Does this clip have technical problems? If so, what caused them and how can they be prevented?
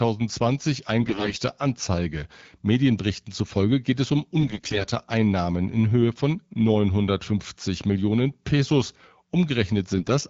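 Yes. AMR bit errors occur at 1.02 to 1.42 s, 4.40 to 4.86 s (right after "zufolge geht es um") and 9.98 to 10.10 s, heaviest in the first burst. Flipped low-priority bits misplace excitation pulses and skew gain and spectral values, so the wideband speech turns hoarse and gargly while keeping its pitch and level. Stronger channel coding or a more robust, lower AMR-WB mode when the radio link weakens would prevent this.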